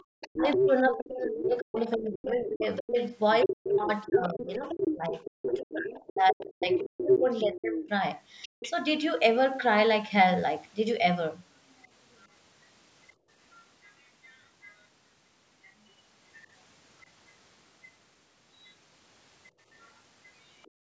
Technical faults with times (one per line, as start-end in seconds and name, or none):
0.00-8.70 other side's voice leaking through
0.28-7.80 speech suppressed in double talk
8.47-8.60 background gated by the echo canceller
12.20-14.83 other side's voice leaking through
13.15-13.29 background gated by the echo canceller
18.64-20.71 other side's voice leaking through
20.71-20.92 background gated by the echo canceller